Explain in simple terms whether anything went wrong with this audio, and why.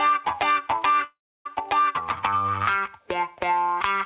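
Around 1.04 s the sound breaks off. The receiver stretches the last bit into a fading buzz, goes quiet for about 0.3 s, and picks up again at 1.48 s with roughly 0.4 s simply gone. That's most likely a long network dropout.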